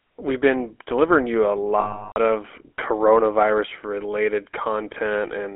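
Throughout, the speech carries the buzzy, gravelly texture of the GSM full-rate codec, consistent with 13 kbps coding. Pulse-driven vocal-tract modelling roughens every voiced stretch, and the line band of 300 Hz to 3.4 kHz leaves a spectrogram blank above and below that strip.

From 1.80 to 2.18 s, just after "been delivering you a" and before "of coronavirus related", lost GSM frames are concealed by repeating the last good parameters. This produces a held, metallic ring. The spectrogram shows frozen horizontal bands.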